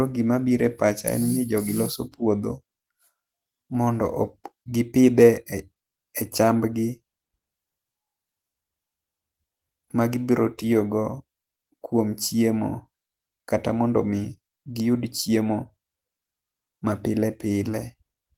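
Listening to this speech recording, nothing stood out as a technical problem at any point.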